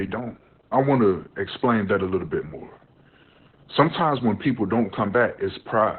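Opus voice compression runs throughout this speech clip, from start to finish, and the damage is heavy. The sound is muffled and hoarse with a slightly robotic edge, which fits a very low rate around 8 kbps in SILK mode: the codec has narrowed the band to 4 kHz, cutting off all upper detail, and models the voice's excitation so coarsely that its natural texture turns buzzy and synthetic.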